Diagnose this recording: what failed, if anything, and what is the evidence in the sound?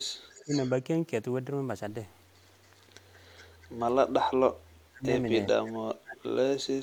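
Echo leak at 0.31–0.71 s, 2.65–2.81 s, 3.14–3.20 s and 3.37–3.67 s: a delayed copy of the speech returns about 400 ms late (395–413 ms), at about 15 dB below the speech at first and then about 30–40 dB below. This likely comes from call processing, where a loudspeaker-side echo canceller left residual echo and sent it back.

Speech suppressed in double talk at 0.45–0.52 s, 4.09–5.08 s and 5.52–6.39 s: the talker drops by about 15 dB briefly, then by about 40 dB and 35 dB for roughly a second each. This is likely the call processing's echo canceller mistaking overlapping talk for echo and attenuating both.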